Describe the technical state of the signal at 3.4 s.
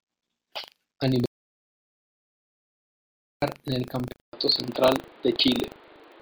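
Audio dropout to silence runs from 1.26 s to 3.42 s, so at 3.4 s the signal is still dead digital silence, with no room tone at all, and the speech resumes abruptly on "en el". About 2.16 s of speech is simply missing. The cause is likely a lost input, such as a device dropping out or a link failing, while the recorder kept writing silence. Nothing was captured to recover.

Buffer tearing is present throughout and returns with the speech at 3.42 s as a steady robotic buzz at 25 Hz, which points to a buffer period of about 40 ms. The writing side and the reading side of the ring buffer have drifted so that they cross inside each period. A small sliver of every buffer, a few percent, holds stale audio from about 70 ms earlier, with hard joins on both sides that produce the rattle. It is heard only while there is signal, so it is absent during the silence.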